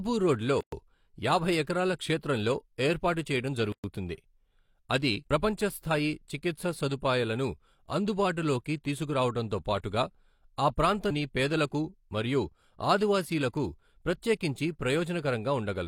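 The speech was encoded in separate pieces and joined without trimming the encoder delay and final-frame padding. So gaps at a join of encoded pieces appear: silent holes of about 118 ms at 0.61 s and 115 ms at 3.72 s, with smeared edges, after which the speech resumes where it stopped.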